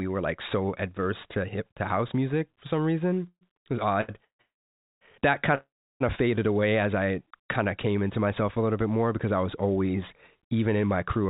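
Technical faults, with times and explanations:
3.28 to 6.02 s, call audio freeze: The sound stops four times: 3.28 to 3.43 s, 4.24 to 4.41 s, 4.41 to 5.03 s and 5.55 to 6.02 s. The middle two run back to back, making one gap of about 0.8 s. Each pause holds the last sound briefly as a fading buzz, then drops into silence. The speech then resumes where it stopped, with nothing lost. The likely cause is late packets leaving the jitter buffer empty.
4.01 s, short stall from a late packet: The sound is held for 74 ms. It carries a slight buzz or dip before the speech moves on. A packet was due but had not arrived. The receiver stretched the last sound to bridge the wait, then continued from the same point. Nothing is missing. The speech simply runs 74 ms later from there, which is heard as one sound lingering too long.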